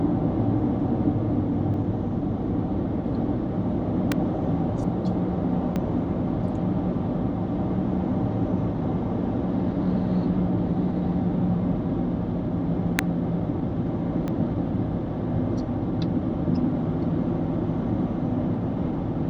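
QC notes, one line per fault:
1.74 s, 4.84 s, 5.76 s, 14.28 s: dropped buffer (overrun). Each is an abrupt jump forward with no gap. About 40 ms goes missing at 1.74 s and about 20 ms at the others, likely from samples being overwritten before they were read. The waveform shows a hard discontinuity, and the spectrogram shows a thin vertical line where two unrelated stretches meet.
4.12 s, 12.99 s: electrical switching spike. A sharp snap is laid over the sound, likely a nearby switch or discharge arcing into the line. The waveform shows a brief, tall spike riding on the signal, and the spectrogram shows a narrow broadband vertical streak.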